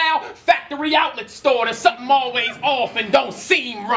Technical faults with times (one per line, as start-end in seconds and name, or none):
none